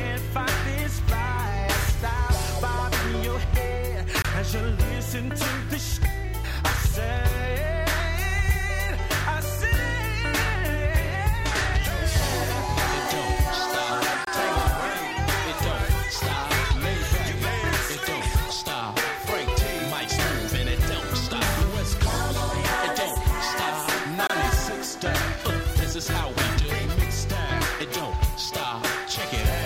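At 4.22–4.25 s, 14.25–14.27 s and 24.27–24.30 s, a gap between chunks cuts 25 ms of silence into the audio at each join of 10-second blocks, with no sound lost. Each is an abrupt hole that shows as a flat waveform segment and a blank vertical spectrogram stripe.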